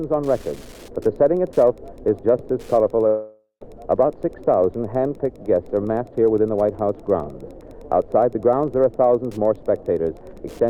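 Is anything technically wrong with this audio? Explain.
Yes, there are two faults.

Wi-Fi interference runs through the whole clip. A nearby Wi-Fi radio's transmissions are being picked up and rectified by the audio circuitry. Its beacon repeats every 102.4 ms, so the result is a steady ticking close to ten times a second. Irregular rasps appear wherever data bursts fall between beacons. The interference sits roughly 35 dB below the wanted sound, faint but persistent under everything.

A long network dropout occurs from 3.07 s to 3.64 s. The likely cause is that the stream stopped arriving for over half a second, so about 540 ms of audio never reached the player. The receiver papered over the gap by extending the last sound it had into a buzzy, hissing tail that fades away. Around 0.13 s of silence follows. Playback then resumes at 3.64 s, with the lost section simply gone.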